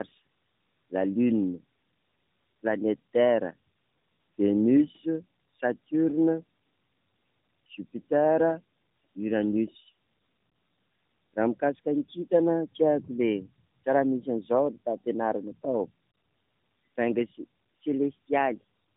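All the way through, this speech has tandem speech coding: it sounds like AMR-NB twice with a G.711 hop between, so it's rough, muffled, warbly, and dead above 3.7 kHz.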